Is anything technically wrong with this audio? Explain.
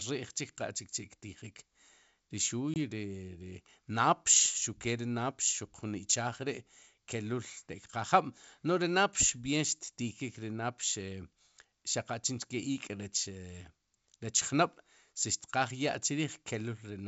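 Yes, there's one fault. From 2.74 to 2.78 s there's packet loss on an ADPCM call: a hard-edged 20 ms gap of silence, which fits roughly one lost packet. Since ADPCM sends only differences, the decoder's predictor and step size lose track of the sender's, so the speech comes back slightly distorted before it settles. The underlying G.722 wideband coding sounds clean, with little or no audible codec damage.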